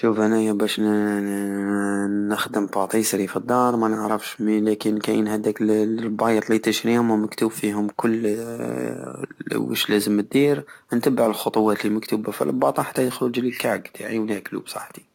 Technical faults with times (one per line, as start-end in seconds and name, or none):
none